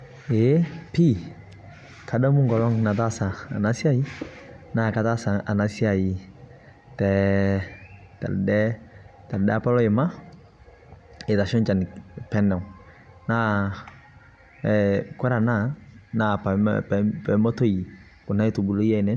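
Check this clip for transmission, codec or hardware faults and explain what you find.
No faults turn up anywhere in this speech recording: the signal stays continuous, with consistent bandwidth throughout.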